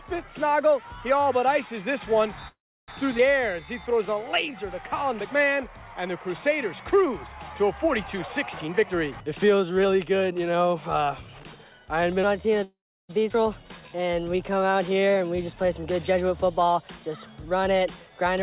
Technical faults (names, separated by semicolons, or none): call audio freeze; skip ahead; jitter buffer slow-down; jitter buffer speed-up; section at the wrong speed